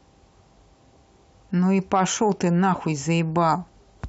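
No technical faults can be heard in this speech recording.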